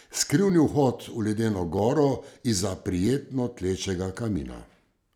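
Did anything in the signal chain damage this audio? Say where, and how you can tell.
Yes. Buffer stage: regular clicks from 0.50 to 4.36 s, about four, every 1.29 s. Likely clock drift buffer slips, roughly a thousand ppm, dropping or repeating a few dozen samples.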